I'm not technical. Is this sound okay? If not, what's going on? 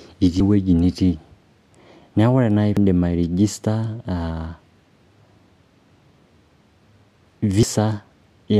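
No. The speech has three brief glitches caused by damaged data in a compressed stream. They come at 0.37 to 0.40 s, at 2.77 s, and at 7.63 s. Each is a quick chirp, squawk, click or short gap. The file is stored in a packed-down form. At these points some of its stored data was spoiled. The player couldn't read those bits properly. It lost its place and had to find the next readable chunk.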